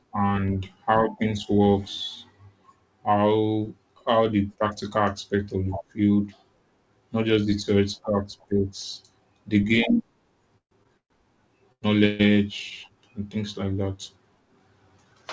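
A speech recording carried over a call link, whose wideband codec leaves nothing above 8 kHz, it has three call audio freezes, likely from packets held up in transit until the jitter buffer ran dry. The receiver extends the last sound as a fading buzz or hiss, then resumes where it stopped, so gaps are inserted with nothing lost. At 10.58–10.73 s and 10.97–11.12 s about 130 ms is filled, ending in roughly 100 ms of silence. At 12.06–12.35 s about 135 ms is filled with no silent stretch. Two short stalls from a late packet occur where single packets missed their slot and the receiver held the previous sound until each arrived. The result is a briefly sustained sound with a slight buzz or dip, 20 ms at 10.83–10.87 s and 94 ms at 11.72–11.84 s. Finally a jitter buffer speed-up at 14.98–15.23 s trims pitch-period slices, around 40 ms in total, to shed the built-up delay, so the speech runs about 13% fast at unchanged pitch and sounds hurried.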